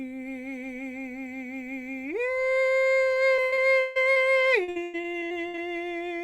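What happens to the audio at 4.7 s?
Repeated packet loss (robotic sound) from 4.64 to 5.59 s: lost stretches, up to 100 ms, are patched by repeating prior audio, so the music turns choppy with pieces missing, showing smeared, blocky spectrogram patches.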